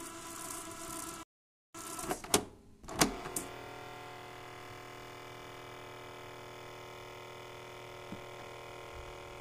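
At 1.23 s a rebuffering stall cuts the sound to silence until 1.75 s; playback ran dry, paused about 0.51 s, then resumed exactly where it stopped.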